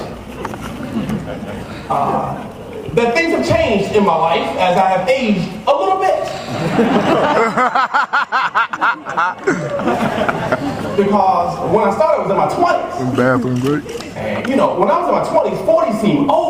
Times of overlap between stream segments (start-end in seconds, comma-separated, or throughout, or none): none